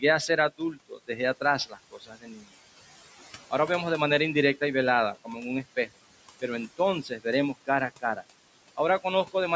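A speech recording in which the room noise, sitting about 20 dB under the voice, is being pumped by noise suppressor artifacts throughout: the suppressor pulls the steady background down by about 17 dB in the gaps, then lets it rise under each phrase. The leftover noise rises and falls with the speech, which sets it apart from plain broadband hiss that stays constant. The same processing also causes speech cut by the noise suppressor at 0.58 to 1.09 s (dips of about 12 dB), 1.66 to 2.43 s (about 17 dB, roughly half a second in all) and 7.03 to 7.25 s (about 16 dB). Soft consonants, word endings or a quiet phrase sound swallowed there. Unlike a network dropout, the sound fades rather than vanishing, and no clicks or gaps of silence are left behind.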